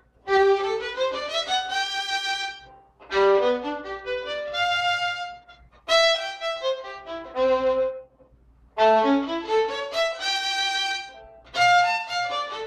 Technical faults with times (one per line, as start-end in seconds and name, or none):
0.00-12.67 periodic clock jitter